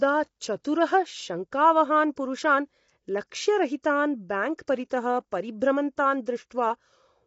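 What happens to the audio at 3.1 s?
Short-frame coding, likely low-delay AAC compression running throughout, resolves pitch harmonics poorly at 3.1 s, so the speech sounds rough and grainy with nothing above 7.8 kHz.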